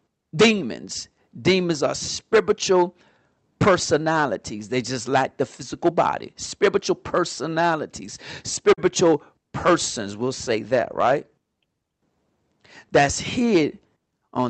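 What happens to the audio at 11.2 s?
At 11.2 s the speech is hard clipped, as it is across the whole clip. Driven about 16 dB past the stage's limit, roughly one to two percent of samples are cut flat, and the added high harmonics sound like harsh fuzz on loud passages.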